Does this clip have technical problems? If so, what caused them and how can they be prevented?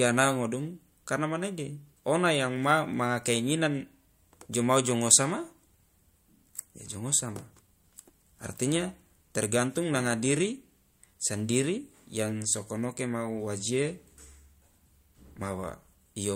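No, this speech clip has no technical problems that can be heard. There is nothing to trace to a cause, so no preventive step is needed.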